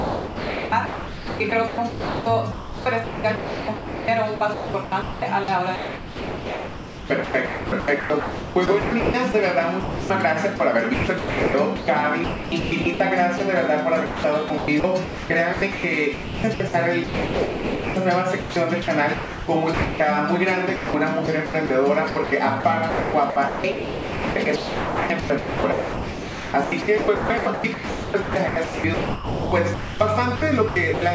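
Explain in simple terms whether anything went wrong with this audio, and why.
From 0.0 to 13.4 s, 14.06 to 20.0 s and 20.76 to 31.02 s, the audio turns choppy as quieter parts become synthetic hiss. This is likely sound chopped by the voice detector, which kept switching sending off and on.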